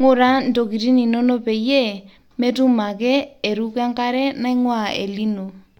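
From 4.36 s to the end, sample clock jitter: timing wobble of a few microseconds adds faint hiss, roughly 40 dB down, visible as haze above loud, bright speech on a spectrogram.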